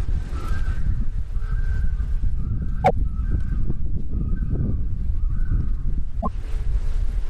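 Damaged data in a compressed stream hits this recording of sounds twice, from 2.81 to 2.91 s and from 6.18 to 6.28 s, each burst lasting about a tenth of a second. At both points a stretch of the encoded file is corrupt, so the decoder misreads the affected frames and loses sync until it finds the next valid frame header. The result is a brief chirp, squawk, click or short hole cutting across the sound.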